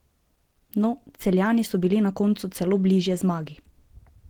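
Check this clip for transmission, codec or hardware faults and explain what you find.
One codec fault runs through the whole clip: Opus compression. It is plainly audible from start to finish. The cause is likely Opus in its hybrid mode, at a rate that fits about 16 kbps. At that rate the upper bands get too few bits for real detail. Their energy is kept, but the gaps are filled with folded or noise-like content. The speech sounds muffled and hoarse, with a rough, grainy edge. The bandwidth is not narrowed, with content reaching about 20.4 kHz.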